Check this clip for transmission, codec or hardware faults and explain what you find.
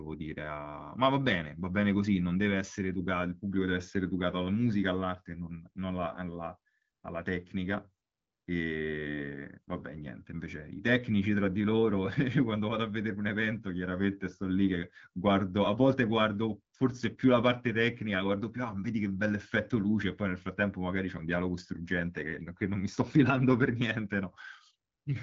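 No faults can be heard in this speech.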